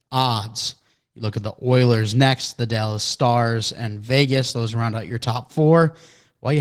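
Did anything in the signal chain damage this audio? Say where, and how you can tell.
Yes. The damage happens at the codec stage, from Opus voice compression across the whole clip. The speech sounds hoarse and slightly robotic throughout, with coarse, buzzy texture that points to a low bitrate, around 16 kbps. The top of the band is still present, so this is not a plain low-pass or narrowband phone line. Hybrid coding, with SILK linear prediction below 8 kHz and a thin CELT layer above, keeps the highs but quantises the excitation roughly in 20 ms frames.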